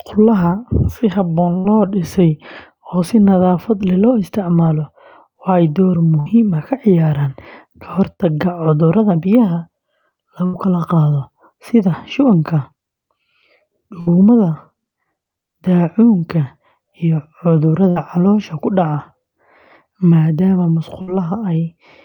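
At 1.57 s the speech breaks with a burst of packet loss: about 60 ms of audio is lost, and the receiver bridges it with roughly 70 ms of extended, fading sound before picking up later in the utterance. On a spectrogram the harmonics flatten into a smeared, decaying band and then jump abruptly. In the waveform the envelope droops, then resumes at a mismatched phase.

From 6.20 s to 10.67 s come scattered short gaps, about three separate holes, the longest around 70 ms. Together they conceal only about 5% of that stretch. Each is patched by repeating the preceding sound, giving brief ticks or smeared syllables. A spectrogram shows isolated vertical seams where the texture briefly freezes, and the waveform shows short repeated cycles.

Overlapping this, from 9.10 s to 18.85 s, a jitter buffer speed-up trims short pitch-period slices, roughly 70 ms in total. The speech runs about 1% faster at unchanged pitch, too little to sound hurried. 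No spectrogram feature stands out; only a slight timing compression against the original would reveal it.

Further bursts of packet loss hit at 14.00 s, 17.90 s and 21.01 s. Each drops about 60 ms, concealed by roughly 57 to 64 ms of decaying buzz or hiss, with the same fading harmonic smear and envelope dip on screen.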